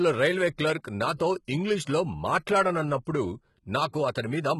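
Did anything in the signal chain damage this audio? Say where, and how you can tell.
Yes, at the codec stage, across the whole speech recording. The upper band sounds synthetic rather than recorded: sibilants come out gritty and lispy, with a metallic sheen that doesn't follow the lower harmonics. This is likely HE-AAC compression, with damage heavy enough to suggest a bitrate around 16 kbps. Only the lower spectrum is truly coded, and the treble is patched in by copying lower bands upward under a coarse envelope. On a spectrogram, the top shows blocky, repeated texture that stops dead at 11.8 kHz.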